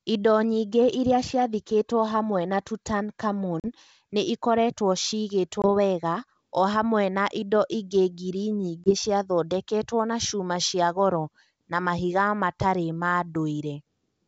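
Packet loss on an ADPCM call leaves hard silent gaps at 3.60 s (40 ms), 5.62 s and 8.84 s (20 ms each). The decoder's predictor falls out of step. Speech resumes slightly distorted.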